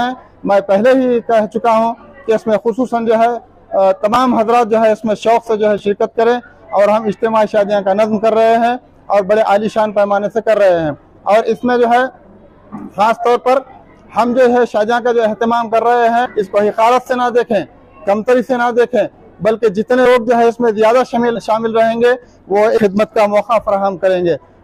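At 4.14 to 4.16 s and again at 5.78 to 5.80 s, the output has chunks out of order. In each case one 10 ms block of audio arrived or was written one chunk late, so it plays after the block that should have followed it. No audio is lost, but the swap leaves three hard joins packed into a few hundredths of a second, which sounds like a tiny jumbled stutter.

In the later part of the clip, compressed frames are skipped. Whole coded frames never reach the output, either because they are missing from the stream or because the decoder rejected them as damaged, so the audio jumps forward. The jumps fit a frame length of about 20 ms. The first, at 16.25 to 16.30 s, drops about 300 ms (some fifteen frames). Later jumps at 20.05 s, 21.35 to 21.39 s and 22.77 to 22.84 s lose about 100, 100 and 150 ms. Each join is a sudden skip ahead.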